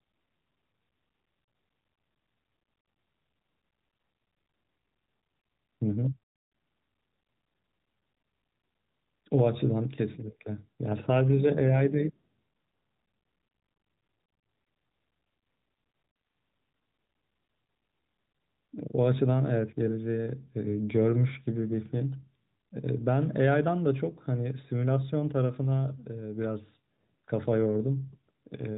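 Nothing stood out on listening to this speech, which carries the narrow, mobile-call character of the AMR narrowband codec, with no content above roughly 3.8 kHz.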